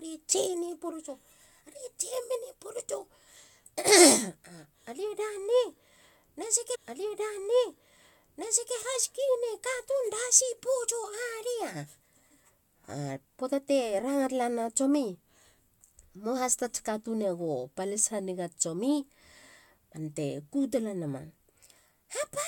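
A speech recording with a stream segment repeated: right after "na seke", at 6.74 s, the audio jumps back and replays about two seconds of what we just heard, running through to 8.75 s. You can catch a small blip at the jump point where the replayed chunk butts against the live one. That's the player fetching or queuing the same segment twice, so the programme ends up roughly 2.0 s longer than it should be.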